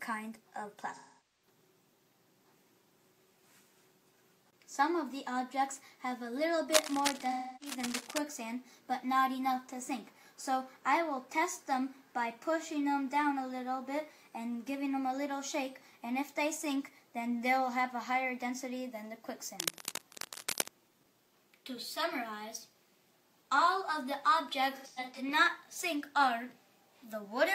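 The audio has AAC frame loss with concealment at 0.95–1.46 s, 7.31–7.76 s and 24.75–25.21 s. The decoder patched the gaps from the last good spectrum, leaving smeared, noisy stretches. The first gap loses about 0.43 s, consistent with roughly ten frames, and the second about 0.3 s. The third is broken into scattered dropouts, the longest around 0.1 s. Cable scratch noise appears at 6.74–8.18 s, overlapping the second dropout, and again at 19.60–20.69 s. It sounds like uneven scratching bursts roughly 5 dB below the signal, likely from a worn cable or connector moving.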